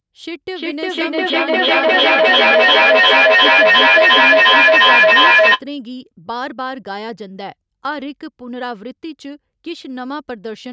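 From 0.56 s to 5.65 s the speech is shadowed by copies of itself that return roughly every 0.4 s, each thinner and more ringing than the last, and instead of fading they build until the returning sound peaks at about 14 dB above the speech itself. This is feedback echo between two devices: one device plays what the other's microphone sends, that microphone picks it up again, and neither echo canceller removes sound played by the other device.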